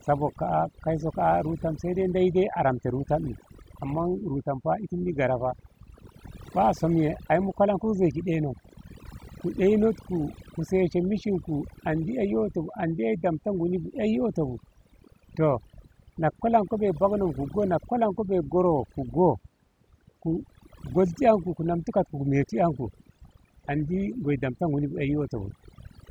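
From start to finish, the speech carries overdone noise removal. A noise reduction stage was pushed too hard on a noisy recording. It drives individual frequency bands far down, or off entirely, whenever they sit near its noise estimate. Quiet parts of the voice fall below that line and vanish with the noise. The gaps between phrases drop to near silence, dotted with twinkling specks.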